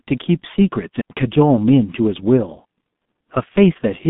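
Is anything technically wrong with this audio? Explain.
Yes. Throughout, the speech carries heavy G.723.1 codec damage, consistent with a roughly 6 kbit/s stream. Nothing comes through above about 3.8 kHz, and the band sits near 150 Hz to 3.6 kHz. Coarse 30 ms frame modelling leaves it muffled and hoarse, with smeared consonants.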